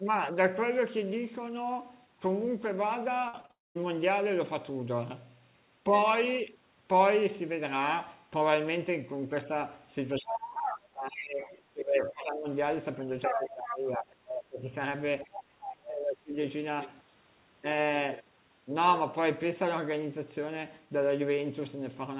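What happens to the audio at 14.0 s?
From 12.95 to 14.73 s the speech ducks by about 20 dB, likely speech suppressed in double talk by an overlap-confused echo canceller; waveform and spectrogram visibly thin.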